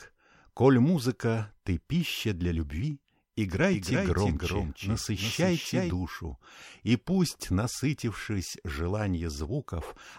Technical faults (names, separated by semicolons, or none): doubled audio track